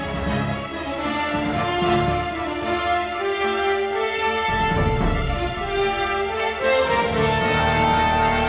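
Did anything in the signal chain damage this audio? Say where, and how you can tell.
No, nothing in the signal chain damaged this audio. It has come through a WebRTC call path, and nothing above 4 kHz reaches the output, the narrowband limit that points to a telephone codec such as G.711 A-law.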